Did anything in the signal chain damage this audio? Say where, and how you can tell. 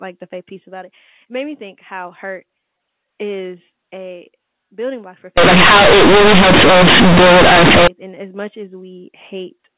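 Yes, at the sample-format conversion stage: right after "a building block for", from 5.38 to 7.88 s, the A-law bytes are read as linear 8-bit samples with no expansion (companded audio read as linear). The speech turns into loud, buzzy distortion with heavy noise in the gaps. On the waveform the section swings widely and is bent out of shape, quiet parts as large as loud ones. The spectrogram shows a dense broadband smear up to the 4 kHz telephone limit.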